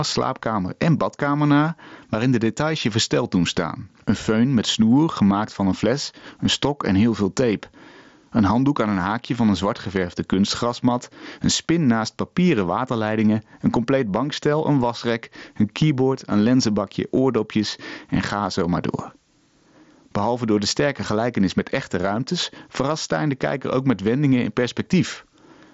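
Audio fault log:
throughout, gain pumping: the gain swings about 15 dB, so loud and soft parts end up closer in level and everything sounds squashed. Likely the mic gain is set way too high and a fast limiter keeps hauling it down.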